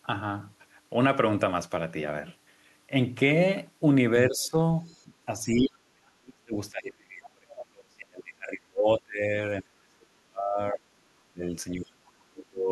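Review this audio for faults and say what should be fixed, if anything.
Speech suppressed in double talk appears four times: a shallow dip of about 10 dB from 4.29 to 4.55 s, then much deeper cuts of about 35 dB from 5.41 to 9.37 s, about 30 dB from 9.62 to 11.49 s, and about 35 dB from 11.73 to 12.7 s. The speech sinks, thins and breaks into fragments. The likely cause is an echo canceller that could not tell the talker from loudspeaker echo while both sides spoke, so it attenuated everything. On a waveform the envelope collapses in blocks. On a spectrogram the harmonics fade or vanish across those spans, with the upper bands going first. Tuning the canceller's double-talk detection to hold near-end speech, rather than ducking it, would prevent this.

The other side's voice leaking through occurs twice: a faint trace, about 35 dB below the speech, from 4.86 to 5.04 s, and a brief, stronger burst, about 25 dB down, from 7.26 to 7.30 s. 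These are likely scraps of far-end audio that the echo canceller did not fully remove from the microphone signal. On a spectrogram they show as weak, disconnected harmonic patches that do not match the talker's pitch track. On the waveform they are small, isolated ripples. A better-converged adaptive filter with stronger residual echo suppression would stop this leak.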